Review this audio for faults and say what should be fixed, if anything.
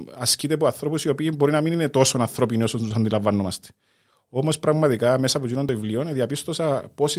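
At 1.74 s and again at 5.69 s the speech jumps forward with no gap. The waveform joins two non-adjacent stretches directly, so at each point there is a discontinuity in the trace. The spectrogram shows a thin vertical seam where the harmonics shift abruptly. About 10 ms is missing each time. The likely cause is a dropped buffer (overrun), where the capture program fell behind and the hardware overwrote unread samples. Enlarging the capture buffer or raising the audio thread's priority would prevent this.

From 2.88 to 2.92 s there is short concealed packet loss. The first 20 ms never arrived, and the decoder filled it by extending the preceding sound and then blending back into real audio. On a spectrogram the concealed stretch looks smoother and more uniform than its surroundings, with harmonics carried flat or replaced by shaped noise. The waveform shows a repetitive or noise-like patch rather than a gap. 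Better network jitter buffering or a more stable connection would prevent this.

Within that same window, from 2.90 to 2.92 s, one lost packet was rebuilt from error correction. The following packet carried a low-bitrate copy of it, and the decoder played that 20 ms copy instead of leaving a hole. The rebuilt frame sounds rougher and noisier. On the spectrogram it shows less-defined harmonic detail and more diffuse energy than the neighbouring frames. The waveform shows no break. Reducing packet loss on the link, or allowing more redundancy, would prevent this.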